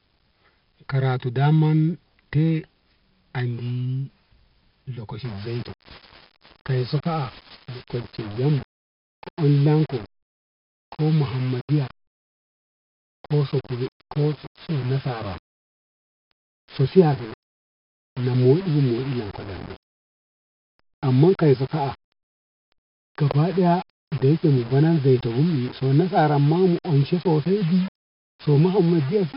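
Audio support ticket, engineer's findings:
4-bit ADPCM compression, full clip. Gritty hiss riding every loud syllable, harsh edges on sharp onsets, dull top end. Spectrogram: hard ceiling near 5.3 kHz with nothing above, broadband noise smeared under each voiced stretch and rising with level. Waveform: jagged, steppy attacks where the adaptive step lags. Heavy codec damage. The 4-bit-per-sample prediction error gives signal-tracking noise; the band limit and about 44 kbps point to a sample rate near 11 kHz.

Low bit depth without dither, 5.25 s to end. Grainy distortion that shifts with the speech, quiet tails breaking up or sputtering instead of decaying smoothly. Waveform: visible staircase on low-level passages, near-silent stretches dropping to silence. Spectrogram: noise floor pumping with the signal, about 20 dB under it, no steady dither floor. Likely a requantisation to about 6 bits with plain rounding, so the error follows the signal.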